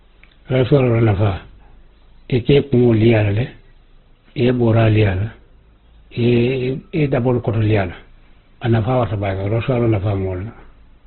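Speech, heavy Opus compression throughout: nothing above 4.3 kHz, and a grainy, rough, noisy texture, likely from band filling in an encoder starved near 12 kbps.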